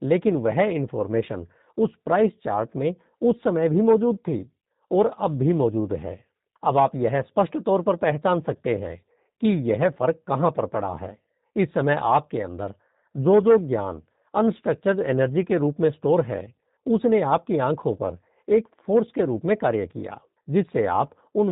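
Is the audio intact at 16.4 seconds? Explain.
No. At 16.4 seconds, as across the whole clip, the speech carries G.729 codec damage. It is rebuilt from a vocal-tract filter, pitch predictor and sparse pulses, which fits an 8 kbit/s stream. Nothing above 3.8 kHz survives, and the voice sounds plainly rough and synthetic.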